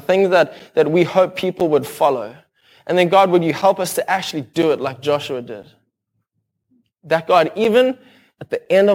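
At 1.60, 2.61, 3.62, 4.62, 5.63, 7.64 and 8.65 s, a gap between chunks inserts 7 ms of silence where 1 s blocks join. Each is heard as a hard-edged dropout, seen as a blank vertical stripe on a spectrogram and a flat notch in the waveform.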